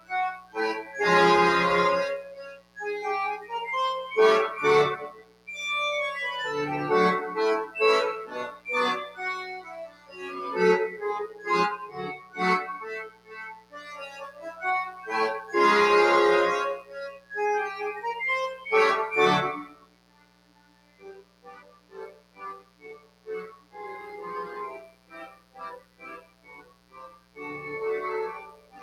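A mains buzz runs throughout. Switching spikes on a 60 Hz supply leave a steady, raspy harmonic buzz roughly ten dB below the signal. A noise suppressor meant for speech is also applied to the sound throughout. It treats sustained content as noise, and its gain swings by about 20 dB, so the audio pumps and thins. The sound is cut by the noise suppressor at 0.00–0.56 s, 2.40–2.78 s, 5.11–5.48 s, 8.52–14.43 s, 16.82–17.31 s and 19.65–28.82 s. Drops reach about 14 to 17 dB, and held sounds sink in level while decays are cut short.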